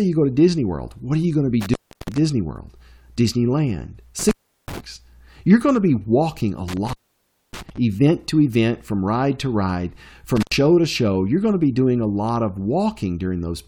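The speech drops out four times, each gap edged with crackle and leaving faint hiss: 1.61 to 2.18 s (open about 340 ms), 4.19 to 4.80 s (about 370 ms), 6.68 to 7.78 s (about 600 ms, the longest), and 10.37 to 10.54 s (about 90 ms). This is intermittent contact. A loose plug or cable breaks the signal path for a moment, and the scraping of the contacts as it opens and reseats makes the crackle.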